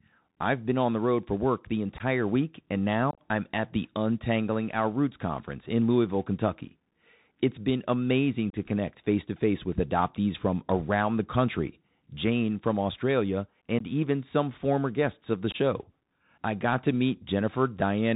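The whole clip is speech carried over a Bluetooth CVSD headset codec. Nothing above 4 kHz survives. The sound fits a 64 kbps one-bit link whose adapting step lags loud high sounds. S sounds turn scratchy, and a grainy hiss sits underneath.

Unconcealed Bluetooth headset packet loss strikes at 1.98 s, 3.11 to 3.22 s, 8.50 s, 13.79 s and 15.51 s. Lost packets become abrupt gaps. At 3.1 s, scattered losses chop the sound roughly. Speech returns briefly quieter after each hole.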